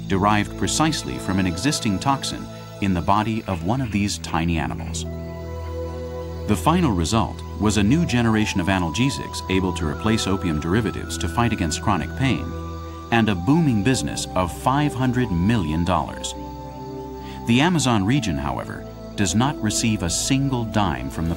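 No technical faults can be heard anywhere in the audio.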